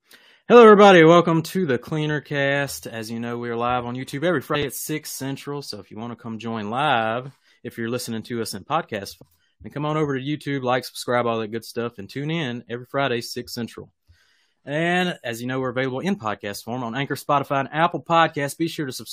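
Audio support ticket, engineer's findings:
Short glitches at 4.54–4.56 s and 9.21 s. Damaged data in the compressed stream: the decoder misreads corrupted frames, loses sync and hunts for the next frame header.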